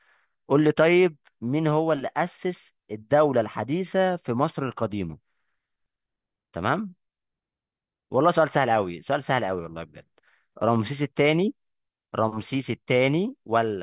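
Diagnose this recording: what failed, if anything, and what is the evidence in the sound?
Nothing failed: the sound of the recording gives no evidence of a fault at any stage.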